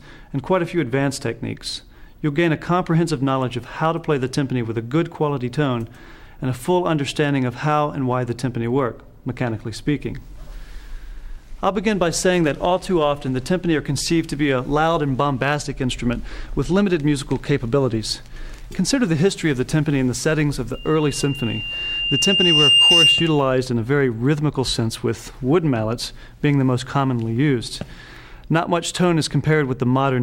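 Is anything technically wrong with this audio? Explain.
Yes. From 20.74 to 23.52 s a single piercing tone near 2.8 kHz swells over roughly two seconds until it sits around 10 dB above the rest of the sound. This is loudspeaker feedback squeal: a microphone was picking up its own loudspeaker, and at that frequency the loop gain passed one, so the tone kept reinforcing itself.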